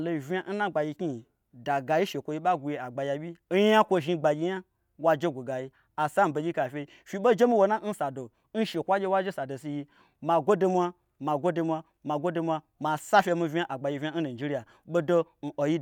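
Nothing in this stretch of speech stands out as a technical fault, so there's no problem to point to here.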